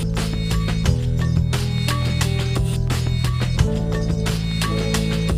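Nothing technically wrong can be heard in this audio. There is no fault to place at any time and no cause to trace.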